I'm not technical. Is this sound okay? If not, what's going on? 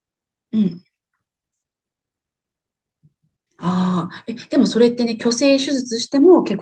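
Yes, nothing stood out on listening to this speech, which sounds like an ordinary internet call, including the slightly softened top end that such calls normally have.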